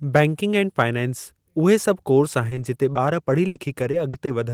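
Choppy, robotic speech from 2.49 to 4.29 s, just after "फाइनेंसि उहे सभु कोर्स": repeated packet loss, with about 220 ms patched over by stretching preceding sound, gaps up to 80 ms.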